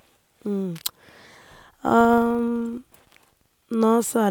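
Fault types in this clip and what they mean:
Filter restarted on every block: the filter starts each block from silence, causing a level-following buzz at about 23.4 Hz, which fits a 2048-sample block, from 2.01 to 3.53 s.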